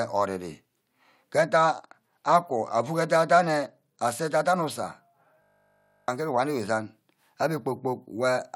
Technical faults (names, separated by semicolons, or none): Bluetooth SBC bit pool drop; system hang loop